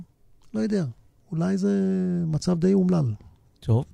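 Listening through this short speech recording, nothing stood out as a technical problem.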